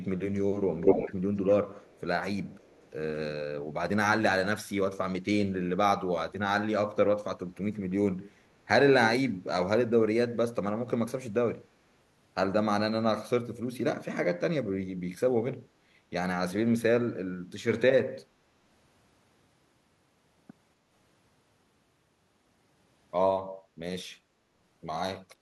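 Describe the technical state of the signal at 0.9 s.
At 0.9 s you're in an echo leak running from 0.82 to 1.15 s: a delayed copy of the speech trails about 247 ms behind, a little louder than the speech itself. Likely a loudspeaker echo canceller on the far end letting its mic pickup through.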